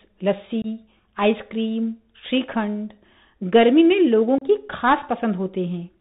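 Throughout, the speech carries the Bluetooth CVSD headset codec: a one-bit adaptive delta coder, fitting a 64 kbps link, cuts everything above 4 kHz and leaves granular hiss and scratchy s sounds, unlike a wideband codec's smearing. At 0.62 s and again at 4.38 s, unconcealed Bluetooth headset packet loss drops about 22.5 ms and then 30 ms, a few packets each. The gaps are abrupt rather than smoothly filled in, and the speech resumes briefly quieter as the codec's step size rebuilds.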